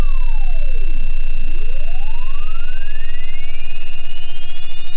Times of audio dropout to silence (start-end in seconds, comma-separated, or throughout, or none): none